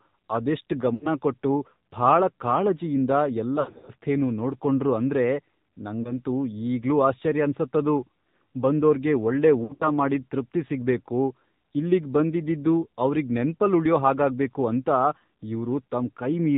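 Throughout the clip, the speech has passed through the AMR narrowband mobile codec at 7.4 kbps, and the damage is plainly audible. Everything above 4 kHz is gone, so sibilants lose their edge. At this low rate, the vocal-tract model and sparse pulse excitation leave a buzzy, synthetic coloration. What sets it apart from plain low-pass filtering or a telephone band-pass is this synthetic, modelled quality, not just dullness.

Lost AMR speech frames break into the speech four times. From 0.94 to 1.11 s, about 80 ms of speech is missing in one run. The decoder repeats the last good pitch and spectral settings at falling gain, so the sound smears and sags before recovering. From 3.60 to 3.92 s, 220 ms of gaps are scattered over 280 ms, with the longest run 80 ms, which gives a choppy, warbling stretch. Around 6.0 s there is a single brief dip, which fits one lost 20 ms frame. From 9.64 to 9.87 s, 120 ms is lost across 160 ms, with runs up to 60 ms. 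Unlike the hard silences or clicks of a dropout, these gaps are filled with drawn-out, fading imitations of the preceding speech, and the voice comes back weak or rough for a moment afterwards.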